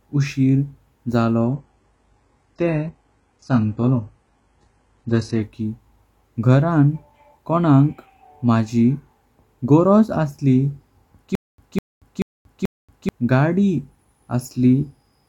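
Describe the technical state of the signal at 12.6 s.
At 12.6 s the signal is inside a stutter with silent gaps, running from 11.35 to 13.09 s. A fragment of about 202 ms repeats four times. Each repeat is followed by 232 ms of digital silence, a 434 ms cycle. A stalled stream likely kept replaying its last buffer.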